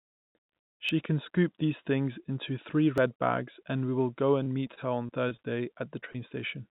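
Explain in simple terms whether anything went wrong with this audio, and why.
Several things went wrong, all brief, in the kind of path a phone or internet call takes. Because of that call path, nothing above 4 kHz comes through, which gives a narrow, telephone-like sound.

The first problem is a dropped buffer (overrun), heard as a small jump in the sound at 0.89 s, just before "can scoop these things", and again at 2.98 s, between "these things into three" and "bags and we will". The likely cause is that the recording software fell behind and the hardware wrote over audio it hadn't yet collected. Roughly a fiftieth of a second disappears at the first point and about a hundredth at the second. Nothing fills those gaps, so the sound on either side is joined directly.

From 4.43 to 5.40 s, right after "and we will go", there is repeated packet loss (robotic sound). Seven separate pieces of the call arrived too late or not at all, and the longest gap is 26 ms. 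Each gap was patched by stretching the sound just before it. Because the gaps come one after another, the sound turns choppy, with about a seventh of that stretch made up of filler rather than real audio.

There are two cases of short concealed packet loss, at 6.00 to 6.04 s and 6.12 to 6.16 s. Each time about 20 ms of audio failed to arrive. The receiver covered the hole by continuing the preceding sound and then blending back into the real signal. Each one is heard as a quick smear or wobble, not a clean gap.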